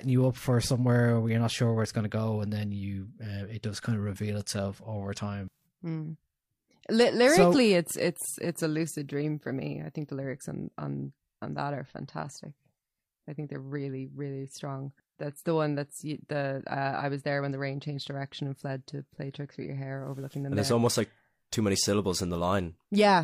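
No technical faults are audible.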